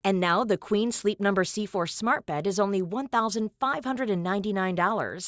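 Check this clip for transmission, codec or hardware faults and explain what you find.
One fault runs through the whole speech clip: the resampler restarted on every block. The 24 kHz to 16 kHz conversion treated each 100 ms block in isolation, so each block edge picks up a small error. This is heard as soft ticks at 10 per second during speech and absent in pauses. On a spectrogram these show as thin vertical lines every 0.1 s, and the waveform shows small steps at each boundary.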